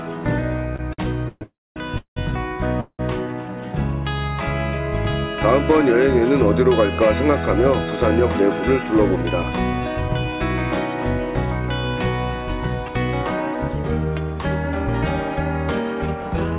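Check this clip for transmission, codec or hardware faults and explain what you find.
The clip has three kinds of network timing fault: a stutter near the start, two freezes, and three stretches where playback speeds up. The audio is band-limited to 4 kHz, which fits a G.711 A-law call codec.

Repeated stalls (stutter), 0.76 to 2.18 s: the jitter buffer ran dry four times as packets came in late. Each time, the receiver extended the last sound, the longest gap lasting 185 ms. About 28% of that span is filled sound, so the audio drags and stutters.

Call audio freeze at 1.43 to 1.78 s and 2.80 to 3.01 s: the sound halts and a fading continuation fills the pause, 329 ms in the first case and 185 ms in the second. The first decays into 240 ms of silence and the second into 70 ms. The likely cause is packets held up in transit. Playback then resumes where it stopped, with nothing lost.

Jitter buffer speed-up at 8.98 to 10.40 s (110%, roughly 150 ms removed), 13.22 to 14.86 s (111%, roughly 200 ms), and 16.22 to 16.54 s (110%, about 40 ms): the receiver trimmed pitch-period slices to shrink excess buffering. 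The sound rushes while keeping the same pitch.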